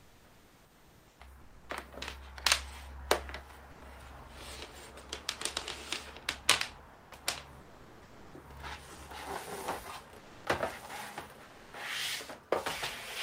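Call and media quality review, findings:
Comfort noise in place of the background, 0.0–1.19 s: real ambience swapped for steady, featureless hiss about 1 dB quieter. Spectrogram shows a smooth, uniform noise floor with no texture. Likely Opus DTX at the sender.

Sound dropped by the voice detector at 1.41–1.69, 3.71–3.81, 6.93–7.11, 7.61–8.33, 8.95, 10.17–10.45 and 11.43–11.73 s. Up to 640 ms of sound lost. Waveform shows abrupt flat gaps filled by comfort noise. Likely Opus DTX gating quiet sound as background.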